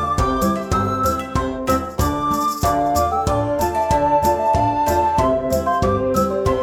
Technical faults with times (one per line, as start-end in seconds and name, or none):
0.41 damaged data in a compressed stream